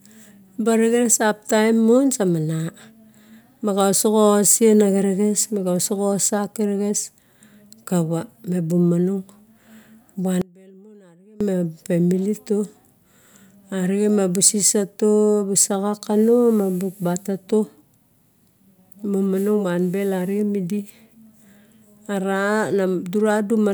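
The speech path likely lost its feed for about a second while the downstream chain stayed live, an audio dropout to a faint residue from 10.42 to 11.41 s. The speech cuts off abruptly in mid-flow rather than pausing or fading. For those 0.99 s, only a faint trace of the sound remains, roughly 25 dB below its normal level. Then the signal snaps back at full level just before "ma family".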